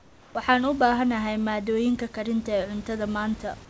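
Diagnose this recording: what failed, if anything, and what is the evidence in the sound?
From 0 to 0.35 s, before the speech begins, the background is replaced by comfort noise. This is a call-processing fault, most likely discontinuous transmission: the sender went silent and the receiver filled the gap with synthetic noise. The fill is steady and featureless and sits about 4 dB below the real room noise that follows. On a spectrogram it appears as a smooth, textureless wash under the 8 kHz ceiling. The waveform shows a flat, slightly lower noise floor before the real background returns.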